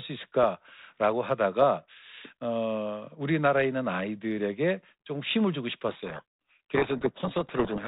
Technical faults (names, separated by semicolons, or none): codec payload misread